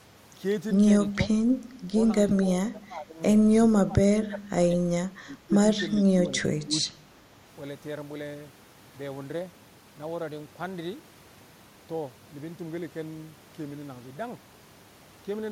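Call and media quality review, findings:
Speech suppressed in double talk: level dips at 1.15–1.43, 2.69–3.20, 3.68–4.00, 4.19–4.66, 5.12–5.53 and 6.00–7.02 s, down about 10 to 20 dB. Likely the echo canceller ducking the near-end talker during overlap. The level dips partially rather than dropping to the clean silent gaps of packet loss.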